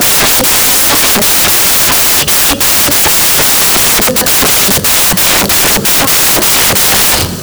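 From start to finish the speech is buried under samples built from the wrong bytes: the reader assembles each sample with misordered or shifted bytes, so the rapidly changing low bits dominate. Unlike steady hiss or clipping, this loud, harsh noise sounds close to white on the louder passages.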